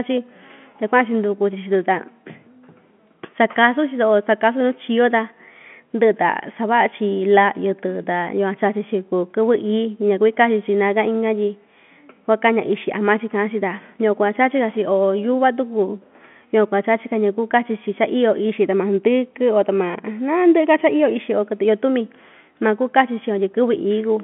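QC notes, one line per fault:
No faults found; the speech sits in a telephone band of about 150 Hz to 3.4 kHz, as expected of G.711 mu-law coding.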